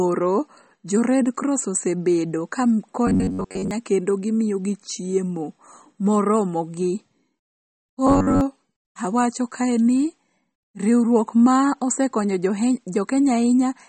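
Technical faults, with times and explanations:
throughout, MP3 compression: the speech sounds watery and swirly, which fits a likely 32 kbps encode.
3.07–3.71 s and 8.07–8.41 s, robotic sound from repeated short buffers: after "red cross osebedo ka" and before "awacho kae ni riwruok", a rigid metallic buzz at 93.8 Hz, likely from a looping buffer of about 10.7 ms that repeats most of the time, shown as repeating waveform cycles and evenly spaced harmonic lines.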